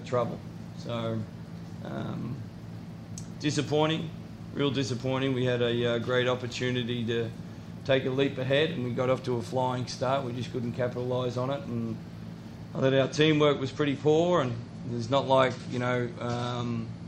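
At 12.76 s the audio drops abruptly, with no gap, to an adaptive stream at a lower bitrate until the end. Nothing remains above 11 kHz and codec artefacts grow, which fits a switch from 128 to 48 kbit/s MP3. Unlike a dropout, playback never pauses.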